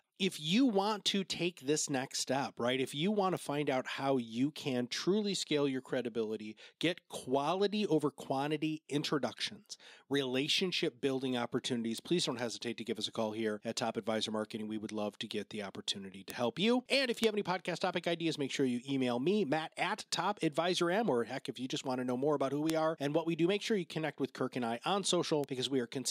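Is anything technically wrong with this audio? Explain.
Yes. The speech has six bit error spikes: 3.37 s after "you want to", 11.98 s before "please don't hesitate to", 16.30 s, 17.24 s, 22.70 s, and 25.44 s after "and I on". Each is a single broadband tick, about −24 dBFS at the first, second and last, about −12 dBFS at the others. A flipped bit throws one to three samples off by a power of two before they return. Unlike a dropout or splice click, no audio is missing, and the tick is unrelated to the signal.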